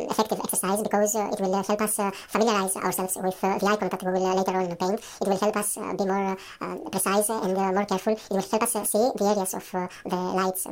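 From start to finish the audio plays at double speed, a fault of the audio read two samples at a time: each pair of samples is taken as one frame, so everything runs twice as fast and sits an octave higher. On a spectrogram, harmonics sit twice as far apart. The waveform shows events compressed to half their length.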